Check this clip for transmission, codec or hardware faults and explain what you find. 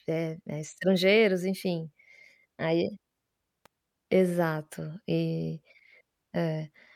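One fault turns up in this speech clip. An electrical switching spike at 3.66 s sounds like a sharp snap laid over the voice, fairly faint at around -35 dBFS and over almost instantly. It is likely an arc from a nearby switch, motor or static discharge that the audio line picked up.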